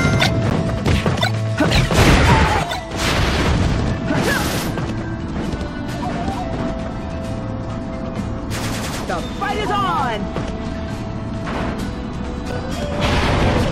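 Two brief hard-edged dropouts to silence break the audio at 0.5 s and again at 12.52 s, each lasting only about 10 ms and 6 ms. These are gaps between stream segments: the timestamps of consecutive 2-second segments leave a small hole, which the player fills with silence, so nothing is actually lost. At 2.63 s the whole sound, background noise included, abruptly drops by about 6 dB and stays lower until the end. This sudden gain jump is likely a digital gain change or bit shift applied in a single step with no ramp.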